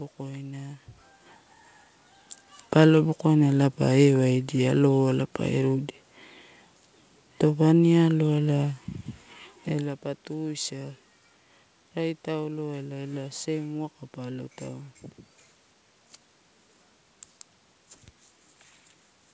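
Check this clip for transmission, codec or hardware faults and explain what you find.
I can find no transmission, codec or hardware faults in this clip.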